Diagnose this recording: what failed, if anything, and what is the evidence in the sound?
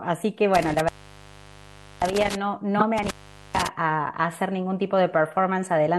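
The whole clip has a watery, swirling quality with dulled treble and smeared consonant attacks, likely MP3 compression at a low bitrate, around 64 kbps. Because it is constant rather than event-based, it sits at the codec stage, where weak frequency lines are dropped frame by frame.

Intermittent contact in the analogue wiring causes two dropouts, from 0.55 to 2.35 s and from 2.98 to 3.67 s, the line open for about 1.13 s and 0.44 s. Crackle at each edge points to a loose plug or cable, not network loss, which gives clean or smoothed gaps.

A corrupt frame was decoded from 2.78 to 2.85 s, spanning about three frames, with a brief error burst peaking near -10 dBFS. Energy lands at wrong frequencies for the length of the damaged frames, so this is a bitstream fault at the decoder.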